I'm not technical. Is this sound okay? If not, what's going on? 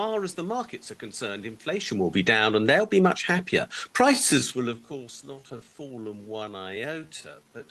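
No. Right after "are concerned inflation will", at 2.13 s, automatic gain falling sets in. The recording system's level control judged the input too loud and turned it down over about half a second, to 2.6 s, so the speech and its background sink together.

Almost immediately, from 2.52 s to 3.19 s, automatic gain rising follows. The same control found the input too quiet and now turns the level back up, so voice and room noise swell together. The result is a brief dip-and-recover in loudness.

From 4.07 s to the end, the speech suddenly slows to about two-thirds of its normal pace, yet the pitch stays the same. This is likely a time-stretched section, where software lengthened the audio by repeating tiny slices.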